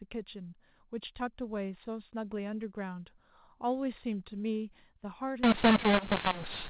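A speech clip on a G.711 telephone link, where from 5.43 s to the end a mu-law versus A-law mix-up turns the sound harsh and garbled. Mu-law samples are decoded as A-law, which scrambles levels and lifts quiet gaps into noise, unlike plain clipping or bandwidth loss.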